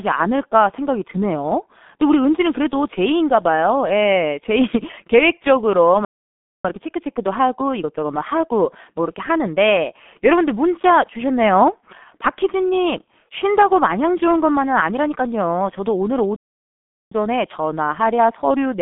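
The whole clip carries G.723.1 codec damage, and it is heavy. Nothing is heard above 4 kHz, and the band sits between 200 Hz and 3.6 kHz. The speech sounds muffled and hoarse. Consonants blur. This fits a very low-rate telephony coder, around 6 kbit/s, with long frames.

At 6.05 s the sound cuts out. Silence lasts about 0.6 s, until 6.65 s. This is a playback stall, most likely the player running out of data. The speech then resumes mid-flow.

From 6.65 s to 9.65 s comes time-compressed catch-up. The player trims its backlog by removing small slices and cross-fading them. Speech runs 1.15 times fast at normal pitch.

A second playback stall starts at 16.36 s. The output stays silent for about 0.75 s, until 17.12 s. From there to the end, catch-up runs again at 1.1 times speed, hurried but at the same pitch.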